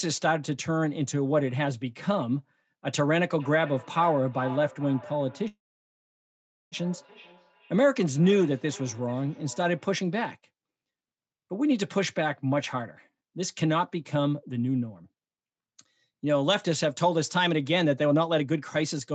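Speech carried over a call, with nothing above 8 kHz, and three faults. From 3.4 to 10.06 s each phrase returns as thinner, ringing copies about every 0.4 s, peaking about 19 dB below the speech. This is feedback echo between two devices: a second device in the room replays the call and its microphone sends it back, beyond the reach of either echo canceller. From 5.47 to 6.75 s the sound stalls, a brief fading tail and then about 1.1 s of silence, and resumes exactly where it stopped with nothing lost, only later. This call audio freeze was likely caused by delayed packets draining the jitter buffer. From 12.2 to 18.53 s the speech runs about 9% fast at unchanged pitch and sounds hurried. This is a jitter buffer speed-up, in which the receiver trimmed short pitch-period slices, roughly half a second in total, to shed surplus delay.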